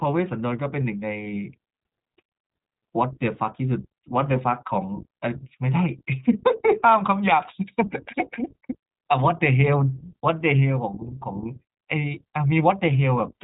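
iLBC codec damage runs through the whole recording: the speech is band-limited, with nothing above about 3.8 kHz, and each 20 ms frame's excitation is coded independently, leaving a plainly audible rough, synthetic edge that fits a 15.2 kbps iLBC setting.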